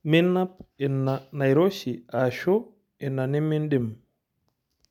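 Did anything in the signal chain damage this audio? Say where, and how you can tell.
No, no stage in the chain damaged this speech.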